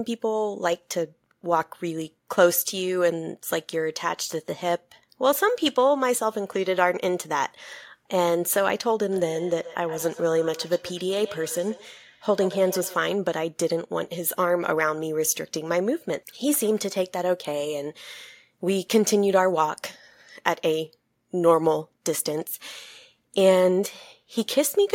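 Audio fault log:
9.11–13.04 s, feedback echo between two devices: across this stretch of the speech, each word returns at an interval of roughly 150 ms, each pass thinner and more ringing, the loudest repeat about 15 dB below the direct speech. A second device in the room is replaying this microphone's signal, and the microphone picks that playback up again. Its echo canceller only cancels its own device's output, so the loop persists.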